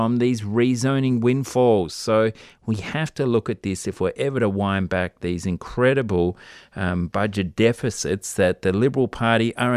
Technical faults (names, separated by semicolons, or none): none